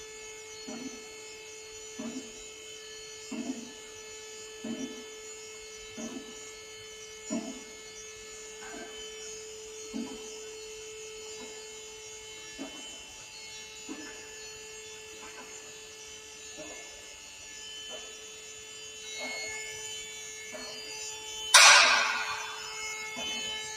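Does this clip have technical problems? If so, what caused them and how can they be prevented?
Yes. A noise suppressor built for speech was left on for this non-speech audio, and it acts throughout. It treats sustained tones, ambience and reverb as noise and pulls them down. The level swings by around 5 dB. To prevent it, bypass speech noise suppression when capturing music or ambient sound.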